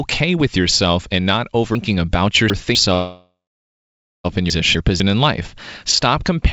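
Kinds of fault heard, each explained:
Chunks out of order: Short pieces of audio are played in the wrong sequence, so nothing is lost but the order breaks. Right after "with yourself and not", from 1.75 to 2.75 s, a 250 ms chunk arrives three chunks late. From 4.5 to 5.0 s, just before "in life", one chunk plays one place late. Each case leaves a jumbled moment.
Call audio freeze: From 2.94 to 4.26 s the sound stalls for about 1.3 s. The last sound is stretched into a fading buzz. Then about 0.9 s of near silence follows. The audio then resumes exactly where it stopped, with nothing missing. The gap is simply inserted, pushing later sound back. The likely cause is packets held up in transit on this G.722 call path, draining the jitter buffer until they arrived.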